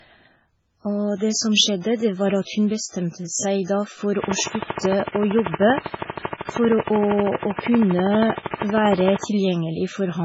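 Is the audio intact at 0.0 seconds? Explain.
No. At 0.0 seconds the speech already shows low-bitrate audio saved at a high bitrate, and this runs through the whole clip. Nothing is heard above about 7.7 kHz, so the top end sounds dull and muffled. Smeared, watery artefacts sit on the speech. The sound points to a very low-bitrate MP3 encode that was likely later re-saved as a high-bitrate MP3. The larger file cannot restore what the first encode discarded.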